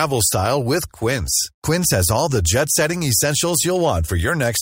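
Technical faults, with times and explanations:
Throughout: imaging from linear upsampling, fitting a 24 to 48 kHz rate change; dulled highs plus mirror images at 12–24 kHz, roughly 15 dB down, put metallic shimmer on sibilants.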